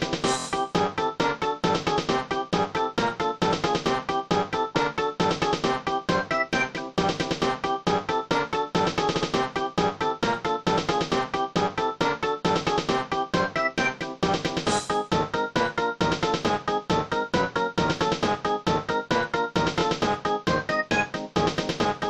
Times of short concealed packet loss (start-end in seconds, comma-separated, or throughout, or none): none